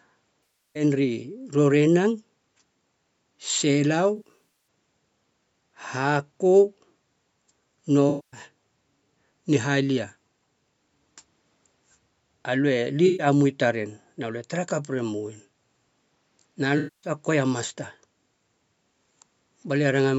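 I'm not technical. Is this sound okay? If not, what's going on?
No. The speech has five short glitches from AAC frame loss with concealment: at 0.45 to 0.83 s, 4.16 to 4.49 s, 8.09 to 8.40 s, 13.06 to 13.27 s and 16.77 to 17.11 s. Chunks of compressed audio went missing, and the player filled each gap by guessing from the last sound it had. That makes a brief smeared, noisy patch. The one near 4.2 s is broken into several small dropouts rather than one gap.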